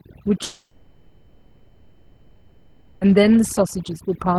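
Throughout, the background sits in near silence with twinkling specks: overdone noise removal, cutting individual frequency bands along with quieter speech detail.

From 0.43 s to 3.06 s the speech gives way to a fading continuation with a brief silence, then resumes with about 2.6 s missing, likely a long network dropout.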